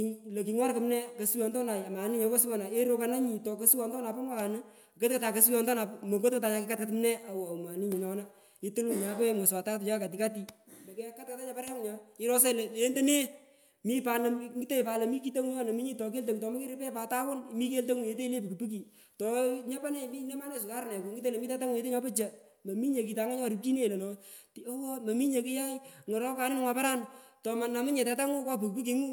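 No technical faults are audible.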